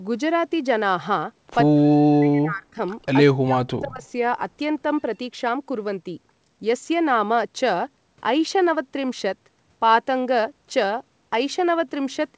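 From 1.71 to 2.78 s the talker's level sinks, by around 40 dB at its deepest, for roughly a second in all. That's speech suppressed in double talk: both ends were likely talking at once, and the echo canceller ducked the near voice along with the echo. Right after, at 3.02 s, there's a brief echo leak, a faint copy arriving 154 ms late, probably loudspeaker pickup the canceller didn't fully remove, sitting about 40 dB under the speech. From 3.27 to 4.03 s the same double-talk suppression returns, dropping the voice by about 40 dB again over roughly 0.7 s, and at 4.02 s another short 154 ms echo slips through, a bit louder at about 35 dB down. The whole thing has the 8 kHz ceiling you'd expect from G.722 on a call path.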